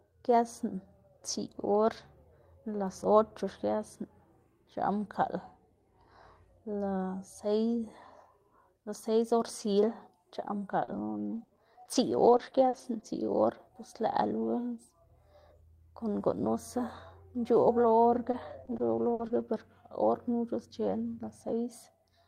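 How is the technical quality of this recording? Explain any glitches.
The recording has two bursts of repeated packet loss, giving a robotic sound. From 10.71 to 13.19 s and again from 18.15 to 19.41 s, short gaps of up to 60 ms got patched by stretching the previous sound, so it turns choppy with pieces missing.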